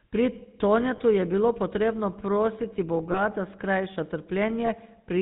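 From the start the whole clip carries the GSM full-rate codec sound: everything is band-limited to 4 kHz, and the speech has that buzzy, gravelly edge from the vocal-tract model being fed a sparse pulse excitation. The damage is plainly audible, which fits the 13 kbit/s full-rate coder.

Then there are three lost GSM frames, at about 0.96 s, 3.12 s and 4.66 s. Each time roughly 20 ms of speech drops out and the decoder fills the gap by repeating the last good frame, so you hear a brief rough, metallic ring.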